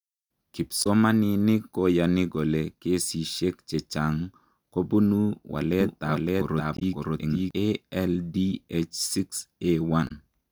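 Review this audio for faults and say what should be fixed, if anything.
Damaged data in a compressed stream: corrupted frames made the decoder lose sync and search for the next frame header, producing brief glitches at 0.82–0.87 s, 6.77–6.82 s and 10.07–10.11 s. Verify stream integrity with checksums and re-fetch or re-encode the file from an intact source.

Doubled audio track: likely a second, slower capture path or an edit kept two copies, so a full-band duplicate about as loud trails roughly half a second behind, starting and stopping abruptly between 5.81 and 7.51 s. Route each source through a single capture path and check edits for stacked overlapping copies.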